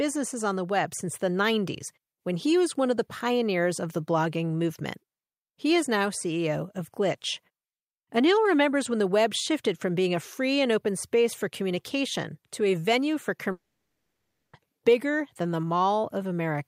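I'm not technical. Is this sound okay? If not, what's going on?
No. After "to a venue for", the speech cuts out from 13.51 to 14.56 s, replaced by a fading buzz. This is likely a long network dropout. It resumes at "bigger than the", with about a second lost.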